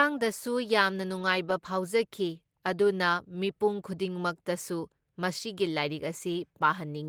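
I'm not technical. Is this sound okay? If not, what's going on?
Yes, this sound is okay, and nothing is going wrong in it.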